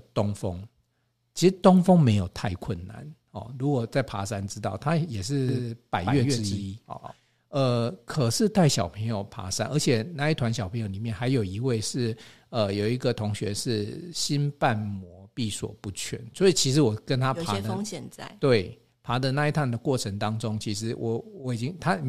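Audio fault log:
5.49 to 7.13 s, doubled audio track: for this stretch the speech gains a second, quieter copy of itself trailing about 150 ms behind, roughly 5 dB down, giving a hard slapback echo with no tail or room colour. The copy switches on and off abruptly at the edges of the section. This likely comes from the same signal being captured twice, once through a slower path, so two full-band copies mix out of step.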